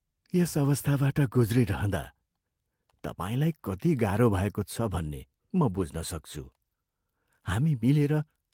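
No technical faults can be heard at any point in this speech.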